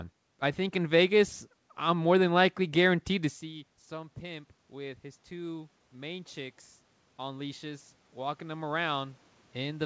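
From 3.08 s to 6.65 s, just after "I'm more than likely", automatic gain rising comes with the talker moving back from the microphone at about 3.5 s, which dropped the input by about 17 dB. The gain control raises its gain gradually by about 6 dB, so voice and room noise swell together and the level is only partly restored. A second gain rise runs from 7.17 s to the end, again after an input drop of about 17 dB.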